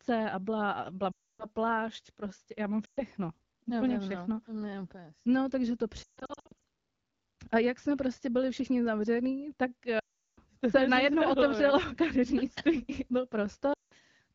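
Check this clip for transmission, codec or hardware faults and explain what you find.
Yes, there's one recurring transmission fault: lost AMR speech frames, at 1.12–1.46, 2.85–3.02, 6.04–6.53 (scattered bursts, longest about 140 ms), 9.99–10.39 and 13.73–13.93 s. Corrupted frames get patched from the last good pitch and vocal-tract settings, so speech smears, then fades quickly toward silence and returns rough, underneath the light HD Voice coding at 12.65 kbit/s.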